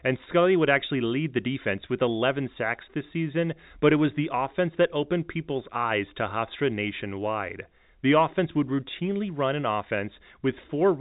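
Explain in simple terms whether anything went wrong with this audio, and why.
Nothing went wrong with this speech recording; it simply carries the narrow sound of ordinary G.711 telephone coding, which cuts off everything above about 3.8 kHz and leaves only the faint background grain that such phone lines normally add.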